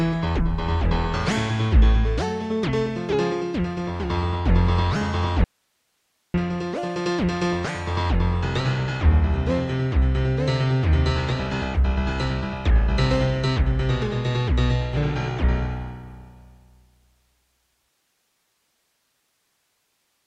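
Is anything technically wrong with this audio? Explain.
Yes. There is an audio dropout to a faint residue from 5.44 to 6.34 s. For about 0.9 s the sound cuts off abruptly and returns just as suddenly. The gap is filled only by hiss, roughly 50 dB below the normal level. The likely cause is a brief loss of the incoming signal while the path after the break stayed live, so its own noise floor carried on through the gap. The hard edges at both ends set it apart from a natural pause or a fade.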